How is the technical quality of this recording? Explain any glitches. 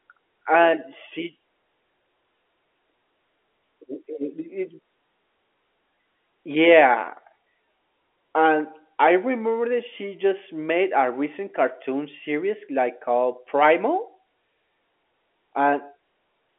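The technical quality holds up, with no glitches to explain in this telephone-band speech.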